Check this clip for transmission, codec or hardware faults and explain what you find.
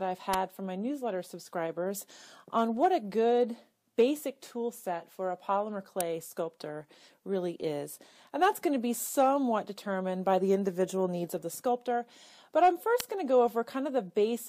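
Three sharp snaps cut through the audio, at 0.33 s, 6.01 s and 13.00 s, each lasting at most about 10 milliseconds and peaking fairly loud, somewhere near -10 dBFS. They sit on top of the underlying sound rather than replacing it. This is an electrical switching spike, likely from a nearby switch, motor or static discharge throwing off a brief arc whose energy the audio line picks up and passes through as a hard, instantaneous click.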